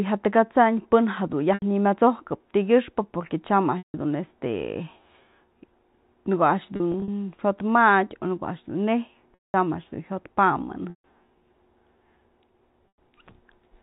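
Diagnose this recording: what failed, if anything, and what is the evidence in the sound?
Six brief held, buzzy stretches where the sound freezes on one repeated pitch cycle and then fades before resuming: 1.54 s (80 ms), 3.78 s just after "tykyëxpë porque tyam" (160 ms), 6.76 to 7.08 s (120 ms lost in scattered runs of up to 40 ms), 9.34 s after "a'ax dun neyj" (200 ms), 10.9 s (140 ms) and 12.88 s (100 ms). This is packet loss with pitch repetition at the network stage. The receiver concealed the missing audio by looping the last pitch period, and the longer gaps fade toward silence.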